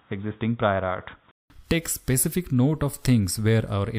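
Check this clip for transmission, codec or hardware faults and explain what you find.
One fault is present. From 0.0 to 1.5 s, nothing above 3.8 kHz comes through, so the sound is dull and boxy. Then a 188 ms silence falls before full bandwidth returns. The likely cause is an input switched to a poorer device. The level barely changes, and that device adds only faint noise.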